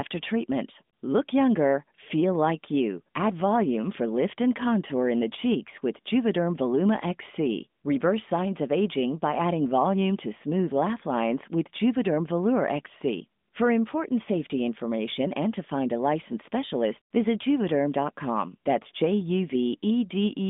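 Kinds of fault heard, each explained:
No faults heard; the speech sits in a narrowband mobile-phone channel with nothing above about 3.7 kHz, as expected for that path.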